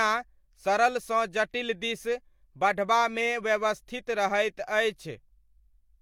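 Nothing technically wrong turns up anywhere in this short bit of speech, so there's no problem to time or trace back to a cause.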